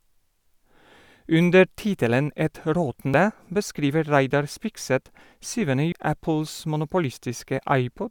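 A speech recording with two short glitches from damaged data in a compressed stream. They occur at 3.14 s and 5.92 s. Each is a brief chirp or blip that cuts into the speech. At each point part of the compressed data is wrong. The decoder cannot read those frames properly. It loses sync and has to find the next valid frame header before playback continues.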